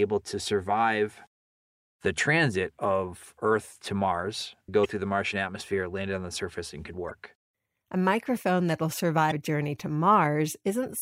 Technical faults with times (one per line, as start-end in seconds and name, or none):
2.15-2.19 damaged data in a compressed stream
4.81-4.86 damaged data in a compressed stream
7.07-7.11 damaged data in a compressed stream
9.28-9.32 damaged data in a compressed stream